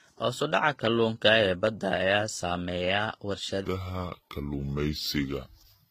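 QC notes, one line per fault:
throughout: transcoding between lossy codecs. Nothing comes through above 14.9 kHz, and one codec's artefacts are heard layered on top of another's. That's likely two lossy passes stacked, which fits a low-rate HE-AAC encode later re-encoded as Vorbis around 46 kbit/s.
3.65 to 5.90 s: section at the wrong speed. From here to the end the speech drops into a slow, heavy drawl, playing at 0.761 times speed, so pitch falls roughly five semitones with it. Likely a player or edit running on the wrong clock.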